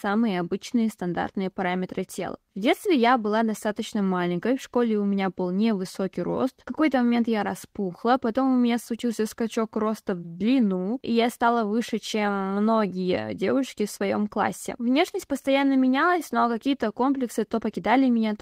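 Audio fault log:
Nothing stood out on listening to the speech at any point in the clip.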